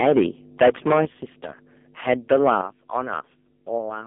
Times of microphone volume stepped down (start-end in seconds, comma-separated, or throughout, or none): 1.05